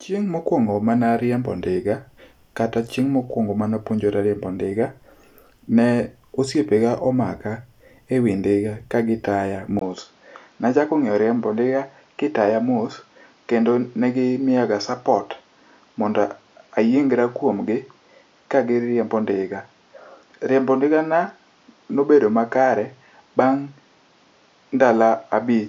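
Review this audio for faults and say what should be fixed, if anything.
The input likely switched to a poorer device at 9.79 s, leaving a 20 ms silence at the switch. From there to the end nothing reaches above 7.1 kHz, so the speech turns duller, with a new noise floor about 40 dB down and the level unchanged. Lock the recording to one input device so the system cannot change it mid-session.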